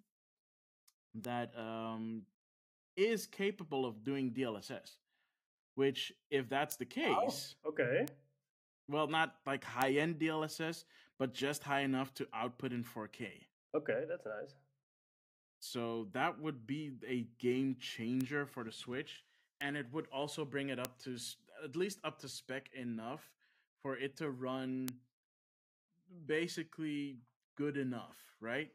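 A speech recording peppered with bit error spikes, eight isolated ticks at 1.25, 6.72, 8.08, 9.82, 18.21, 19.61, 20.85 and 24.88 s. Each is a single sharp click with no relation to the speech around it, peaking somewhere between about -24 and -12 dBFS. That's a flipped bit somewhere in storage or on a digital link, making a sample jump by a power of two and snap straight back. The one at 6.72 s sounds like it hit a couple of neighbouring samples.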